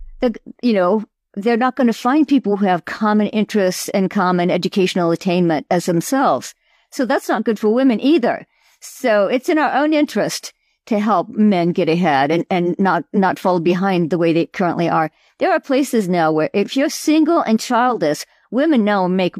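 No dropouts, clicks, distortion or level jumps turn up anywhere in the recording, so there is nothing to flag.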